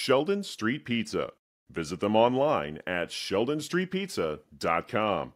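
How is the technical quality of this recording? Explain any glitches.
Listening to the recording, nothing stood out as a technical glitch in the speech.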